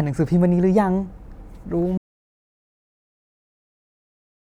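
Speech plays normally until 1.98 s. Then it cuts off mid-flow in an audio dropout to silence. The gap runs to the end of the clip, about 2.5 s. It is silence, with no room tone or hiss underneath. The input was likely lost, through a disconnected device, a failed link or a mute, while recording carried on writing silence. Whatever was said after 1.98 s is gone.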